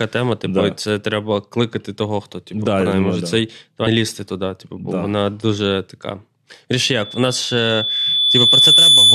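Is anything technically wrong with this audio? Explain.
Yes, there are two faults. At 3.86 s, between "може да цей" and "лізти туди", damaged data in the compressed stream makes the decoder lose frame sync, producing a brief blip. From 6.92 s to the end, a loudspeaker feedback squeal at 3.5 kHz swells over roughly two seconds to about 10 dB above the speech, as the mic-speaker loop exceeds unity gain.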